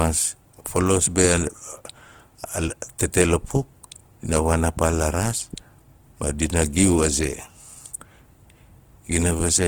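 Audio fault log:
throughout, Opus compression: speech is audibly rough and grainy with noisy, band-filled texture up to 20.2 kHz, likely from CELT-mode Opus at a rate that fits 16 kbps.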